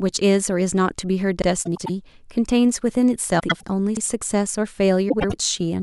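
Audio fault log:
1.42–1.47 s and 3.97–4.02 s: overlapping chunks. Processing blocks repeat every 2.5 s, and each new block begins 50 ms before the previous one ended. That 50 ms of speech plays twice at the join, producing a brief stutter or click at the same regular spacing.
1.65–1.90 s, 3.39–3.63 s and 5.09–5.33 s: frames out of order. In each stretch, two adjacent blocks of about 0.1 s are swapped, which fits runs of four frames each. The speech garbles into a flutter, and no time is lost.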